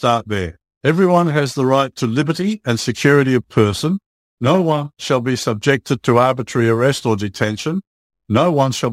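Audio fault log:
Throughout, crude rate conversion: a gritty, inharmonic fizz clings to the speech, rising with louder passages and sibilant, high-frequency sounds, and it sits at roughly 30 dB below the voice. The pattern fits a change from 48 kHz to 44.1 kHz done by simply picking the nearest sample, with no filtering. That periodically skips samples in a repeating cycle, and the resulting timing errors create shifted, inharmonic copies of the speech.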